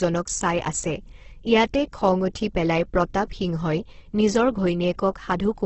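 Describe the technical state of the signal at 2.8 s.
At 2.8 s the speech sounds rough and grainy, with tonal parts smeared into noise and nothing above 8.1 kHz, as throughout the clip. This is likely Opus compression in its CELT music mode, filling starved bands with folded or noise content at a rate near 12 kbps.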